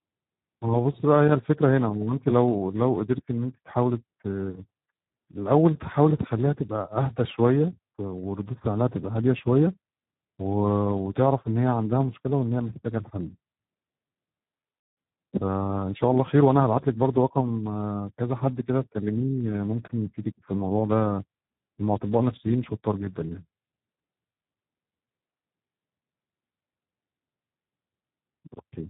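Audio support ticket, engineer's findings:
Speex codec at a low quality setting throughout, consistent with roughly 8 kbps narrowband. Too few bits for the excitation, so the speech comes out hoarse, noisy and near-robotic. Nothing above 3.8 kHz, giving a thin, telephone-like band.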